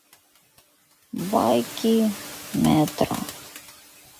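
Noise suppressor artifacts run through the whole speech clip, pulling steady noise down about 12 dB between phrases. The room noise, which rises around 1 s, swells. At 3.64 s a single sharp click appears as a thin vertical line and a waveform step, likely from dropped samples totalling a tiny fraction of a millisecond.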